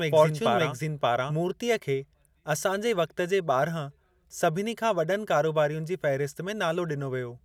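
A doubled audio track runs from the opening until 1.34 s, just before "मूर्तिअ खे": a second full-band copy of the speech trails about half a second behind at roughly equal loudness, likely a slower capture path mixed in, and it cuts off abruptly, leaving no decay.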